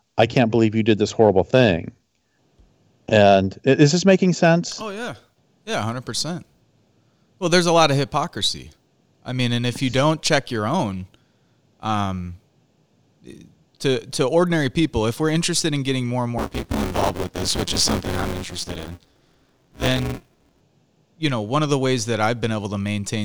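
From 16.38 to 20.61 s, right after "in getting more and", buffer tearing sets in: writer and reader cross inside each buffer, so most of every block replays audio about 20 ms old. A steady 172 Hz robotic rattle, fitting a 256-sample buffer, follows the speech and vanishes in pauses, unlike gap-leaving dropouts.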